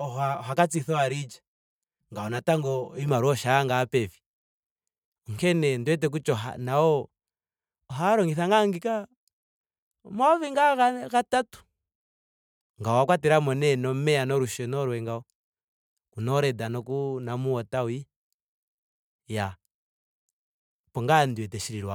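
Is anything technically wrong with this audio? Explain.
Yes. From the start until 3.08 s the speech has channel delay, so comb filtering: one channel trails the other by around 5 ms, and in the mono sum what's common cancels at evenly spaced notches from about 100 Hz up. It sounds hollow and phasey.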